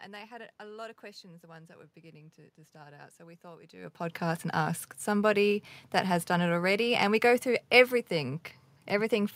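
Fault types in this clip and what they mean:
No fault types are present in this clip, so there is nothing to explain.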